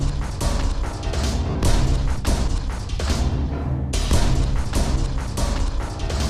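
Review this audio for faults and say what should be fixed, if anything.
Lost LE Audio frames at 1.50 to 1.55 s: about 50 ms went missing, and the LC3 decoder filled the gap by repeating the last spectrum with randomised signs, which leaves a brief noisy smear. The compression shows only light codec damage. To prevent the dropout, keep the Bluetooth link clear of interference and range limits, or allow more retransmission headroom so frames arrive in time.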